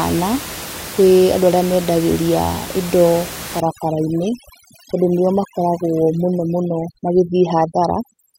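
From about 3.60 s through to the end at 8.38 s, you get overdone noise removal. The room noise, sitting only about 13 dB under the speech, was enough for a heavy-handed reducer to keep flagging bands as noise and pulling them right down. So the background drops and breaks up into little twinkling specks, and the quieter parts of the speech get dragged under too.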